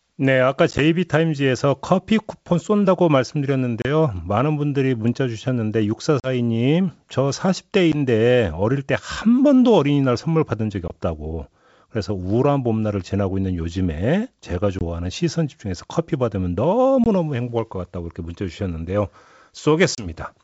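Packet loss on an ADPCM call cuts hard silent gaps of 10 to 40 ms at 0.71 s (three short holes spread over 80 ms), 3.82, 6.20, 7.92, 10.88, 14.79, 17.04 and 19.95 s in this otherwise clear G.722 wideband speech. Unlike a plain dropout, the sound returns slightly distorted before settling. The decoder's predictor and step size have lost track of the sender's.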